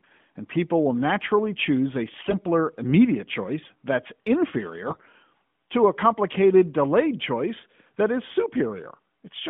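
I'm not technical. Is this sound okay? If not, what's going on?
No. Twice, from 2.14 to 2.37 s and from 4.88 to 5.09 s, the speech turns hoarse and gargly for about a fifth of a second. These are AMR bit errors: on a weak mobile link some less-protected bits in the phone codec's data arrive flipped, so the rebuilt voice keeps its pitch and level but sounds scratchy. The second burst is rougher. Throughout, the sound has the narrow, phone-like band of the AMR narrowband codec.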